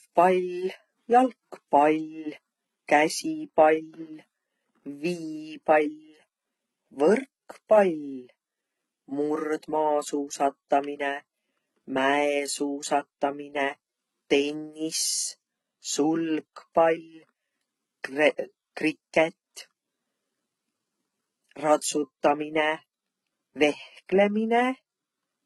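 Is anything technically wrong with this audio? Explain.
Yes. Throughout the speech, the treble sounds bright but false: s sounds come out gritty and lispy, with a metallic edge. The likely cause is heavy HE-AAC compression. The codec encodes only the lower spectrum and fills in the highs by copying lower bands upward under a coarse envelope, so upper harmonics no longer line up with the fundamentals. The damage points to a very low bitrate, around 16 kbps.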